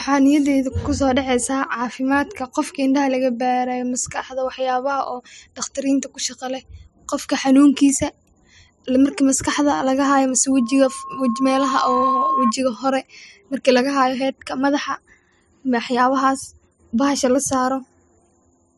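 From 10.51 to 12.54 s there's loudspeaker feedback squeal: the mic catches its own speaker, and a 1.1 kHz tone swells over a second and a half until it's roughly as loud as the speech.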